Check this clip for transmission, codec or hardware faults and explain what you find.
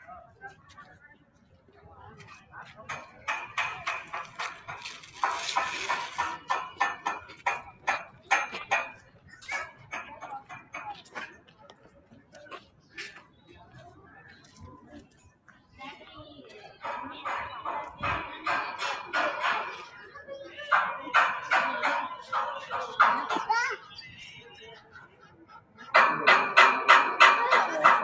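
The faults all come from one cause: a speech noise suppressor working on audio it wasn't built for.

Throughout, the level keeps pumping and fluttering, with held sound and decaying tails sinking while sharp onsets punch through, a swing of roughly 15 dB. This is a noise suppressor applied to music or sounds. It was designed for speech and treats anything steady, ambient or reverberant as background noise, so it keeps ducking those parts and then letting them back up.

In five stretches the sound is cut by the noise suppressor more deeply than elsewhere: 0.25 to 3.27 s, 7.29 to 8.31 s, 8.93 to 9.92 s, 10.41 to 15.79 s and 24.44 to 25.89 s. Sustained and fading material drops by about 12 dB, reaching about 13 dB in the 10.41 s and 24.44 s spans, and tails are cut short. Within each span only parts are pulled down, from under a second up to around four seconds in the longest span. The suppressor judged these sounds to be noise and attenuated them harder than their surroundings. 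The top end stops at 8 kHz, the normal limit of call microphone processing.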